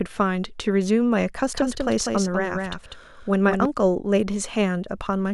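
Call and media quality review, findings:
Doubled audio track, 1.53–3.65 s: full-band speech copy trailing around 200 ms, about 5 dB down, no room colour, hard start/stop. Likely a second, slower capture path mixed in.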